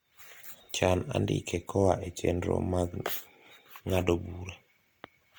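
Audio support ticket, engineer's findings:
Likely low-bitrate Opus compression, CELT mode, about 24 kbps: starved bands filled with folded or noise content. Speech throughout sounds rough and grainy, yet extends to about 20.3 kHz.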